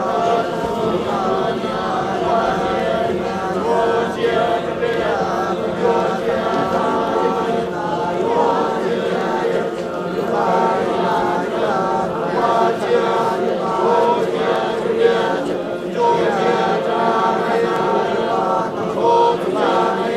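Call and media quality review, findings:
Clock drift buffer slips, likely from two unsynchronised device clocks around 150 ppm apart; regular clicks every 1.07 s, 0.66–19.90 s, as a handful of samples drop or repeat.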